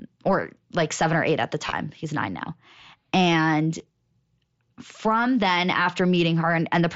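At 1.65 to 1.72 s the speech shows concealed Bluetooth headset packet loss. About 45 ms of audio went missing in short gaps spread across 75 ms, none longer than 15 ms. The receiver patched each gap by repeating a closely matching stretch of the preceding waveform, which produces a brief buzzy, tonal roughness. A second, smaller loss of about 15 ms at 3.78 s is patched the same way, giving a short buzzy tone inside the 8 kHz wideband mSBC band.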